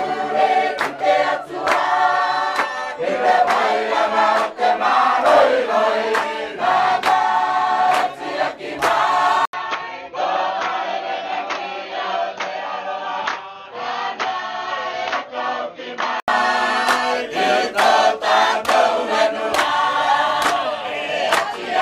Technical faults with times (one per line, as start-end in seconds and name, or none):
9.45-16.28 input switched to a poorer device